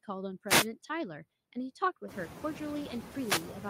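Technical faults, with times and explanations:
throughout: noise suppressor artifacts. The suppressor cuts bands it judges to be steady noise by about 15 dB, frame by frame, so the background sinks in pauses and returns under speech. This includes the room noise that rises about 18 dB around 2 s and then sits about 11 dB below the speech. On a spectrogram the noise floor darkens between syllables and brightens beneath them. The waveform shows the floor pumping.
0.47–0.67 s and 3.09–3.59 s: wireless microphone noise hits. The FM radio link fades as reflected signals cancel, and receiver noise swells into a short swish of static over the audio. A spectrogram shows broadband vertical bands of hiss. The waveform thickens into fuzzy noise across those spans.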